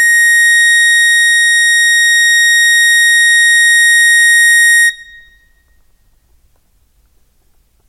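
No faults found in this music clip; nothing audible to flag.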